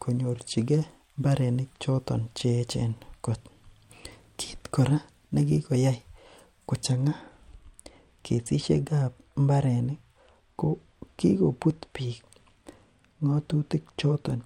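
At 6.92 s the speech turns dull and stays that way to the end. This is de-emphasis applied wrongly. A treble cut meant to reverse pre-emphasis has been applied to audio that had none, or applied a second time. The highs roll off in a smooth slope. At 10 kHz they sit about 8 dB below 1 kHz. Sibilants and consonant edges lose their bite. The voice sounds muffled, as if heard through cloth.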